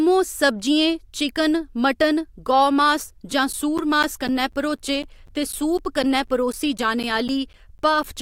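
From 3.53 s, after "गौमास जां", to 8.04 s, periodic USB or driver dropouts blank about 10 ms every 0.25 s: steady ticks as the bus stalls.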